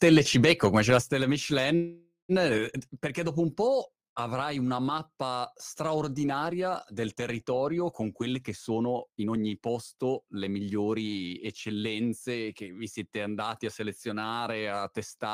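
From 0.03 to 0.97 s, microphone overload flattens the loudest peaks by about 3 dB, likely from excessive input volume. The waveform shows squared-off tops, and the sound gains a harsh crackle.

At 1.02, 2.58 and 3.69 s, the microphone volume steps down by about 6, 3 and 2 dB, likely as the call software's automatic correction. These appear as abrupt envelope drops, landing before "perché dopo un" and before "avrai una mappa straordinaria".

From 1.75 to 2.32 s, a call audio freeze inserts 536 ms of fading buzz or hiss, ending in 110 ms of silence, likely from a jitter buffer that ran empty. The spectrogram shows smeared, decaying bands.

From 8.33 to 11.19 s, between "straordinaria del territorio con" and "eccellenze che vi siete", a jitter buffer speed-up removes roughly half a second of pitch periods to reduce excess delay. The speech runs 119% fast at unchanged pitch, and the spectrogram's syllables crowd together.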